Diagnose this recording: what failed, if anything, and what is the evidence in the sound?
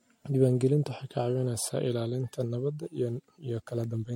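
Codec stage: the speech was most likely re-encoded through MP3 about five times, fitting roughly 62 kbit/s, compounding generation loss: swirly, hollow, smeared throughout, nothing above 16.5 kHz.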